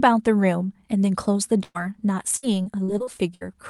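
At 1.63 to 1.77 s, a burst of packet loss: roughly 110 ms of audio is extended and faded, then a short silence before speech resumes with about 120 ms missing. On the spectrogram it shows as a smeared, flat spectrum that thins out. From 2.37 to 3.43 s, repeated packet loss gives a choppy, robotic sound across seven gaps, the longest 61 ms, with nearly a quarter of that span patched. The waveform shows repeated flattened stretches, and the spectrogram shows recurring frozen bands. Throughout, the call codec's spectrum stops near 12 kHz.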